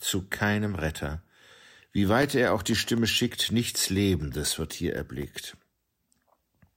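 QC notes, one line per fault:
2.23–5.73 s, periodic USB or driver dropouts: a stall in the USB or driver path removes roughly a millisecond of speech every 0.25 s, filled with silence, so regular ticks sound over the speech. The waveform shows about fifteen evenly spaced gaps, and the spectrogram shows thin vertical broadband lines.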